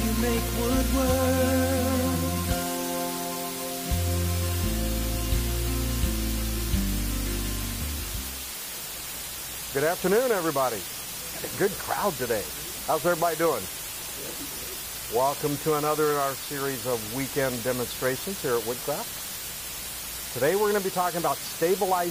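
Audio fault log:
Throughout: low bit depth with dither. The audio is quantised to 4 bits with dither, so the rounding error becomes a constant, even hiss, about 10 dB below the signal.
14.55 s: compressed frames skipped. Roughly one 23.2 ms frame is missing, so the audio jumps ahead by about 20 ms, leaving an audible discontinuity at the join.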